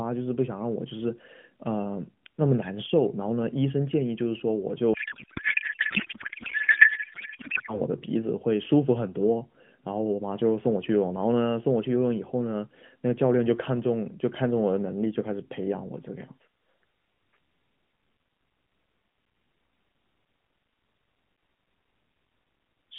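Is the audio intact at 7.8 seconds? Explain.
No, just barely: a codec payload misread runs from 4.94 to 7.81 s. It sounds like octet-aligned AMR unpacked as bandwidth-efficient, scrambling the fields, so the speech turns into garbled warbling noise.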